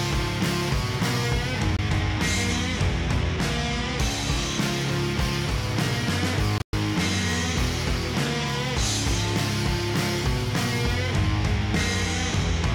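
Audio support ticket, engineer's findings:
Likely Bluetooth dropout: wireless packets missed their playback deadline and were discarded, leaving silent holes. 1.77–1.79 s: brief gap of about 19 ms, consistent with one lost packet. 6.58–6.73 s: 131 ms of silence scattered over 149 ms, with the longest gap at 112 ms, which fits roughly seven lost packets. In both, the audio picks up further along, as though it kept running through the gap.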